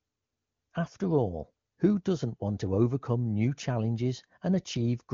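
Nothing stood out on listening to this speech clip.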